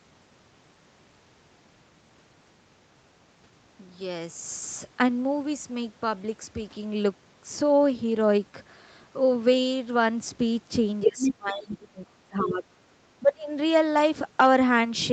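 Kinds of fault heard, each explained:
Other side's voice leaking through: a second voice briefly surfaces near 11.0 s at about speech level, then faintly near 11.7 s, likely uncancelled loudspeaker echo.
Speech suppressed in double talk: from 11.0 to 12.8 s, and again near 13.2 s, the speech drops sharply, likely the echo canceller ducking overlapping talk.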